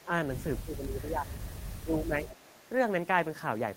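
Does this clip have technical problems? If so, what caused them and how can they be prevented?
Yes. The speech dips in level at 0.04 to 0.09 s (a slight drop of about 5 dB), at 0.61 to 1.37 s (falling as far as about 15 dB), and at 1.84 to 2.3 s (down about 10 dB). This is likely speech suppressed in double talk: with both sides talking, the echo canceller couldn't tell this talker from loudspeaker echo and attenuated everything. Unlike echo, nothing is added; the voice itself sinks. A canceller with better double-talk detection, or a headset, prevents it.

Faint delayed copies of the voice appear at 1.48 to 1.77 s and 2.3 to 2.64 s, trailing the original by 274 ms at about 25 dB and about 20 dB below the speech. This is likely echo leak: the far side's canceller let part of its loudspeaker pickup return. What distinguishes it from suppression is the extra, repeated sound at a fixed lag, not a loss of level. 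Headphones or a properly converged echo canceller on the far end prevent it.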